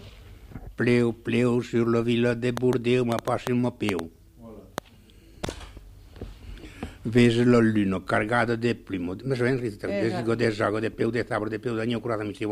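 A train of clicks runs from 2.57 to 4.79 s: about ten similar pulses at an uneven 3.6 per second, peaking around 15 dB above the audio, likely from nearby equipment interference.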